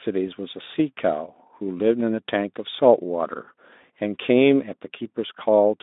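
There are no technical faults to describe in time order anywhere in this speech clip.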